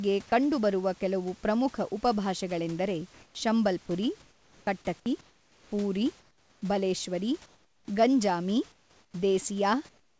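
Comfort noise in place of the background at 3.14–3.35 s and 4.22–4.67 s: in these pauses the room hiss, about 32 dB below the loud speech, gives way to a smooth, featureless noise. The first matches the real level; the second is about 6 dB quieter. The likely cause is the sender's voice detector halting transmission while the receiver synthesises filler noise.

Sound dropped by the voice detector at 5.00–5.06 s: about 30 ms of quiet sound vanishes into 60 ms of steady noise, likely because the detector mistook it for background and stopped sending until it triggered again.

Comfort noise in place of the background recurs at 5.21–5.72 s, 6.20–6.62 s, 7.46–7.88 s, 8.72–9.14 s and 9.89–10.2 s. Each gap sounds flat and about 7 to 9 dB quieter than the real room noise around it, which, like the speech, has nothing above 8 kHz.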